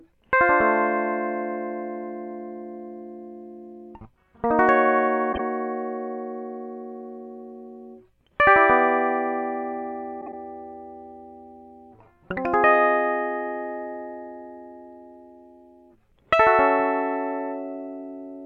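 At 5.32 s the music breaks into a brief garbled flutter, and at 10.21 s a longer one, about 0.13 s, does the same. Both are frames out of order: two adjacent blocks arrived swapped and were decoded that way, so each stretch plays with its halves exchanged. The first swaps blocks of about 26 ms, the second about 52 ms, which fits one and two frames each. No time is lost.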